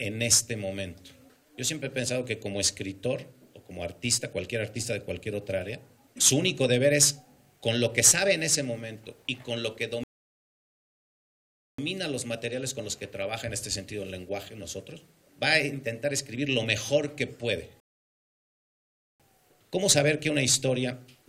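Two rebuffering stalls: the audio drops to silence at 10.04 s for 1.75 s, then at 17.8 s for 1.4 s, resuming exactly where it stopped once more data arrived.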